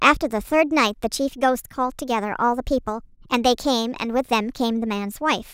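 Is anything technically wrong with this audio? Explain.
Yes. Throughout, the speech has a wrong sample rate. It runs 1.38 times too fast and about 5.5 semitones high, which fits 32 kHz audio played at 44.1 kHz without conversion.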